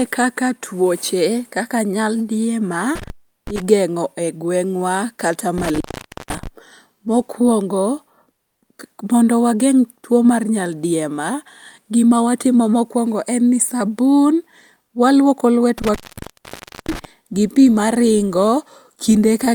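Intermittent contact breaks the speech three times. From 2.95 to 3.62 s, after "kaka tuoche kaka nyaldiema", the line opens for about 373 ms. From 5.58 to 6.47 s, after "e gweng'wa kata", it opens for about 498 ms. From 15.78 to 17.05 s, just before "gi pi maringo", it opens for about 940 ms. Each time a loose connection briefly cuts the signal, leaving hiss, with crackle at both edges. That crackle and residual hiss set it apart from a clean digital dropout, which falls to silence.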